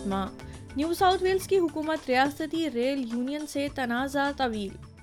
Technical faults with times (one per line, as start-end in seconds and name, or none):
0.39-0.42 loud pop
2.25-2.28 loud pop